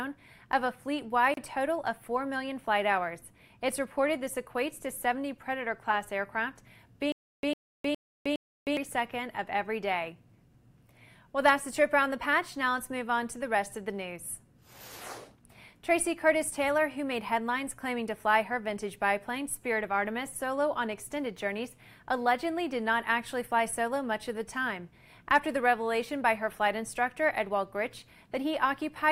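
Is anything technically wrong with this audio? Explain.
Yes, there are two faults.

From 1.34 to 1.37 s there is a gap at a join of encoded pieces: a 32.5 ms silence with smeared edges, left by untrimmed encoder delay and padding where separately encoded sections were joined. The sound resumes exactly where it stopped, with nothing repeated or lost, which separates it from a dropout or stutter.

From 7.12 to 8.77 s there is a stutter with silent gaps. A 102 ms fragment plays four times, each followed by about 310 ms of digital silence, repeating every 412 ms. This likely comes from a stalled player or stream replaying its last fragment on each retry. Unlike the join gap, the same burst repeats and the audio that belonged in that span is missing.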